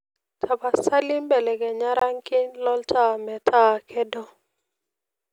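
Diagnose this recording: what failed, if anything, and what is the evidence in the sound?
Block of digital silence, 1.99 to 2.01 s: a 20 ms hole in the speech, pointing to the driver or buffer stage, where the output was left unfilled.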